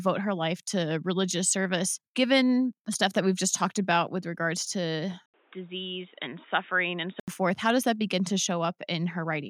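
At 5.26 s the speech drops out for a brief gap of about 80 ms, then returns dull and boxy, with nothing above 3.8 kHz and a new background noise roughly 30 dB under the voice, though the loudness stays about the same. At 7.28 s the full, clear sound comes back. The likely cause is an input switched to a poorer device, a narrower-band microphone or headset call profile that was briefly swapped in mid-recording.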